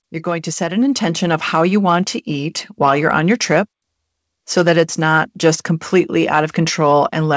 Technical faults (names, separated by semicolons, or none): automatic gain rising